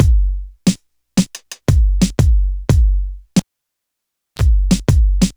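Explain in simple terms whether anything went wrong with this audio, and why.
Something did go wrong: a cable pulled and plugged in, starting at 3.39 s. A pop marks the moment the lead comes out, and the audio then drops to near silence for about 0.98 s. As the plug goes back in, only its tip touches first, which picks up a brief burst of 50 Hz mains buzz lasting about 32 ms. A second pop follows as the full connection is made and the sound returns at 4.42 s.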